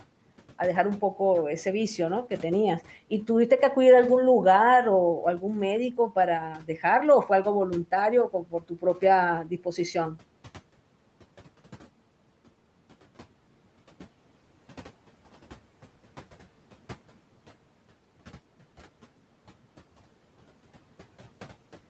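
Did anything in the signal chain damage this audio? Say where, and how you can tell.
Yes. Speech cut by the noise suppressor in the call processing: at 6.58–6.84, 8.29–8.98 and 9.45–9.78 s, speech sinks by about 7, 11 and 9 dB together with the background, unlike packet-loss dropouts, which leave gaps or glitches.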